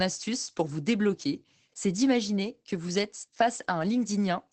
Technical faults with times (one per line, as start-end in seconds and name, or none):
0.00-4.52 Opus voice compression